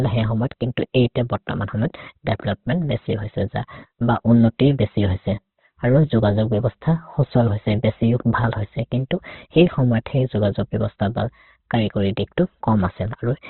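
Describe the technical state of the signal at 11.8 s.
At 11.8 s, as throughout the clip, the speech carries the sound of likely Opus compression at a very low rate, around 12 kbps. Nothing survives above 4.2 kHz, so it sounds narrow and muffled. Starved bands are filled with noise, which leaves the speech heavily rough and grainy.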